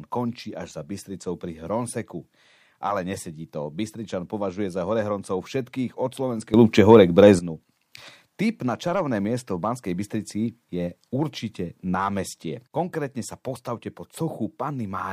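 At 6.54 s the speech and its background noise step up together by about 12 dB, stay there, and drop back at 7.39 s. This sudden gain jump most likely comes from a digital gain change applied between adjacent samples with no ramp. On the waveform the envelope shows hard vertical edges at both times. On a spectrogram the whole band brightens uniformly between them, noise floor included.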